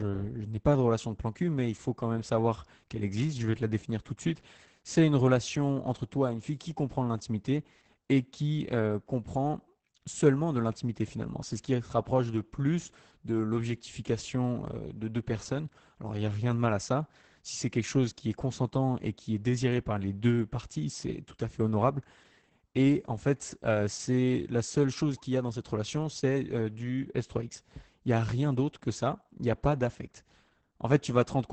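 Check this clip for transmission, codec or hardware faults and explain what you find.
The clip has one codec fault, present throughout: Opus voice compression at a very low rate. The encoder runs its SILK linear-prediction coder, capped to wideband at 8 kHz, with coarse excitation coding, which fits roughly 10 kbps. Speech therefore sounds muffled, hoarse and somewhat robotic, with heavy damage.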